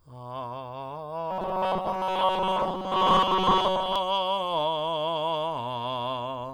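Robotic sound from repeated short buffers runs from 1.31 s to 3.96 s in this music. Across that stretch the sound takes on a rigid, metallic buzz at 188 Hz that loosely tracks the music while hiding its detail. The likely cause is new audio arriving too seldom, so playback keeps repeating the last short block, which fits a block of about 5.3 ms, while most of the real audio in that span is skipped.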